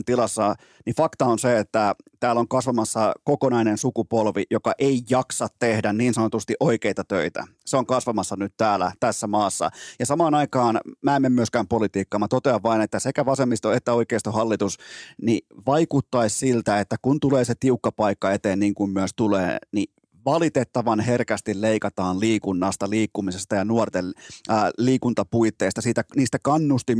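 Nothing stood out as a technical fault anywhere in the speech on listening.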